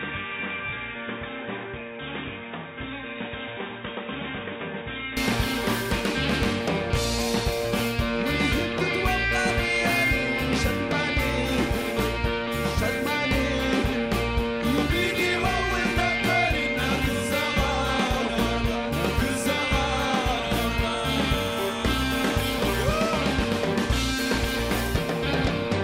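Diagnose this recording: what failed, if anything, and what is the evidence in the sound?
Input switched to a poorer device, from the start to 5.17 s. For the opening stretch the sound is band-limited with nothing above 3.8 kHz, sits around 10 dB quieter, and carries its own background noise roughly 40 dB below the signal. At 5.17 s the full bandwidth, level and cleaner floor return abruptly with no gap. This is likely an input-device change at the driver level, with capture beginning on a narrowband microphone or headset call profile before moving to the proper device.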